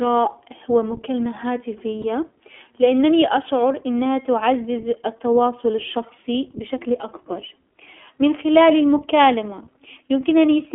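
From the start, the whole clip runs through the iLBC codec, and it's plainly audible. The band is squeezed to roughly 250 Hz to 3.4 kHz, so there's no low warmth and no air on top. Each short block of the speech excitation is coded on its own, which leaves the voice clear but a bit rough and synthetic. The texture fits the 15.2 kbps mode with 20 ms frames.

Around 2.02 to 2.05 s there's a brief dropout, lost iLBC frames. The gap is about the length of a single 20 ms frame. The decoder covers it by repeating the last pitch cycle blended with noise, so you hear a tiny held, slightly buzzy vowel-like smear instead of silence. Because iLBC frames don't depend on each other, the speech snaps straight back to normal right after.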